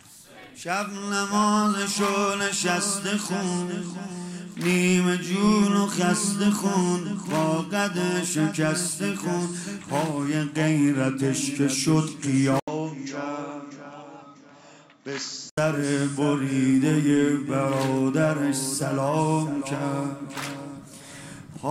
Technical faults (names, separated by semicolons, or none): input switched to a poorer device